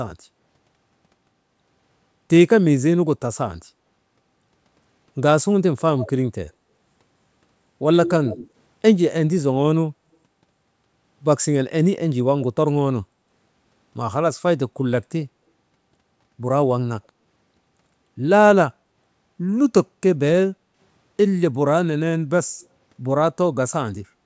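A faint, delayed copy of the speech trails the speaker at 5.99 to 6.1 s and again, somewhat louder but still well below the main voice, at 8.06 to 8.49 s, lagging by 120 ms. This is likely echo leak: on the far end the call played over a loudspeaker, and that end's echo canceller did not fully remove what its microphone picked up, sending part of it back. The room sound then dips by about 10 dB between 20.53 and 20.78 s and by about 6 dB at 24.2 to 24.24 s, recovering each time. That is background gating by the echo canceller, which pulled the microphone down hard while the loudspeaker played.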